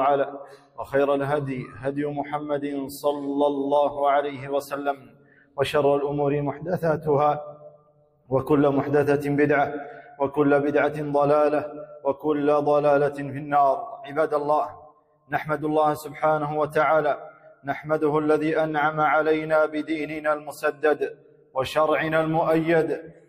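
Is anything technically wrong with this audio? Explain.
No, nothing technically wrong can be heard here: the signal stays steady and intact throughout, with no problems in its level, timing or continuity.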